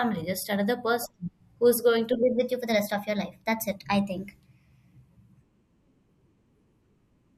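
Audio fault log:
2.23 to 7.37 s: section at the wrong speed. From just after "person who's going to" to the end, the speech runs about 1.12 times fast, so it hurries and rises by roughly two semitones. Speed and pitch shift together, as happens when playback runs on the wrong clock, likely a sample-rate mismatch.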